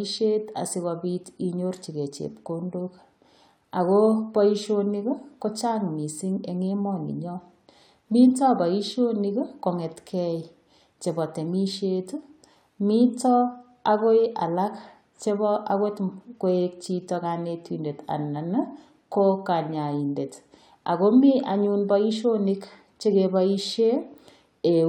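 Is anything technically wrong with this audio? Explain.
No, nothing technically wrong turns up anywhere in this speech recording.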